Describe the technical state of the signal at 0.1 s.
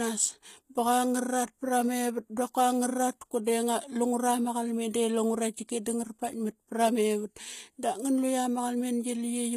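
At 0.1 s the speech is already carrying HE-AAC compression, likely at a low bitrate around 20 kbps, and it persists through the whole clip. The codec codes only the lower spectrum and synthesises the treble by copying lower bands upward under a coarse envelope. The damage is plainly audible: sibilants turn gritty and lispy because the replicated highs don't match the real harmonics, and nothing is present above 14.9 kHz.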